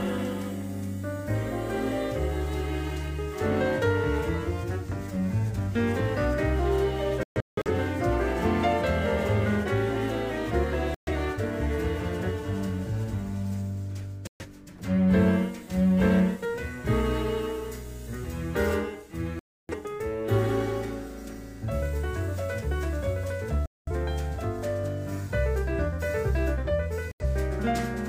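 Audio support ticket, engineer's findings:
Digital broadcast dropout, six events: 7.23–7.70 s (several short holes, about 0.34 s lost in total, longest run 0.17 s), 10.94–11.12, 14.27–14.45, 19.39–19.74, 23.66–23.92, 27.12–27.25 s. Receiver muting on lost or failed-checksum frames; gap lengths fit roughly 43 ms frames. Waveform drops to silence. Spectrogram shows full-band blank vertical columns. The programme resumes later, and the audio in the gaps is unrecoverable.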